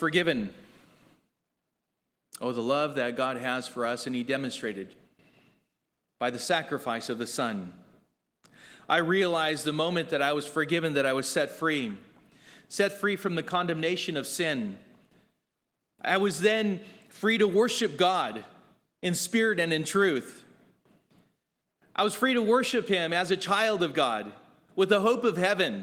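No technical faults can be heard in this speech clip. The Opus voice compression is running in its hybrid mode and keeps the full band, and the light coding texture it leaves fits a rate of around 20 kbps.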